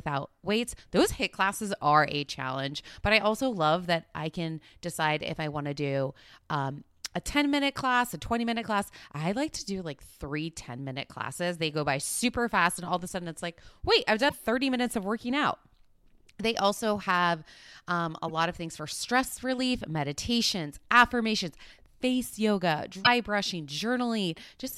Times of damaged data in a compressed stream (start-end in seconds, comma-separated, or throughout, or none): 14.25-14.33, 18.28-18.30, 23.00-23.07